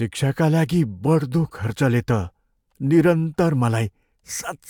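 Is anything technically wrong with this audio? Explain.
No, no technical faults.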